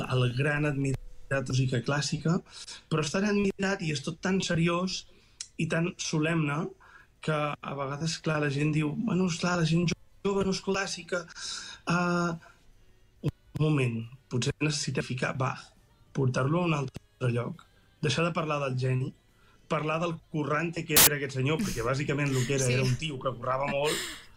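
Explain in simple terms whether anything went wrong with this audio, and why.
At 20.97 to 21.07 s, a file tag is played as audio: the embedded cover picture is read as sound, giving a hard-edged burst of very loud hiss rather than a click or silence.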